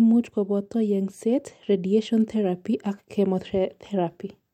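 No technical faults can be heard in the speech.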